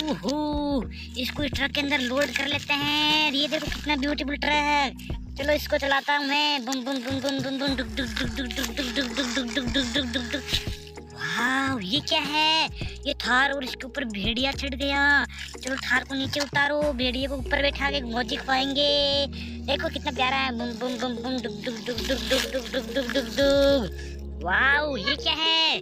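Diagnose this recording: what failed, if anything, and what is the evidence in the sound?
Clock slip clicks from about 0.16 s to 25.78 s: faint ticks roughly every half second, likely single-sample slips between unsynchronised converter clocks differing by around 40 ppm.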